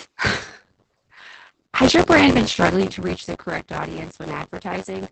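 From start to end the speech carries buffer tearing: the writer and reader of the playback ring buffer have slipped so that they cross inside every period, leaving around 15 percent of each buffer filled with audio from about 20 ms earlier, joined hard at both edges. The result is a continuous robotic buzz at 93.8 Hz, which fits a 512-sample buffer, present only while there is signal. On a waveform, regular discontinuities repeat every period; a spectrogram shows vertical lines at that spacing with harmonics of 93.8 Hz.

Also throughout is Opus voice compression, plainly audible. The sound points to the SILK linear-prediction coder running in wideband at a low rate, around 12 kbps, with 20 ms frames and coarsely coded excitation, so the speech comes out muffled, hoarse and somewhat robotic. A spectrogram shows a hard ceiling with nothing above 8.7 kHz, and smeared, blocky detail in the harmonics that changes at frame boundaries.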